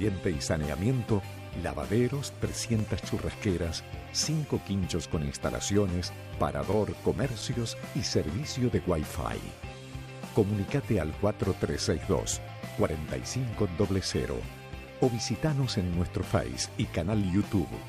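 CD scratch ticks run from 1.41 to 3.25 s and from 6.49 to 7.88 s. Unrecoverable disc damage recurs each rotation, producing about five brief ticks per second.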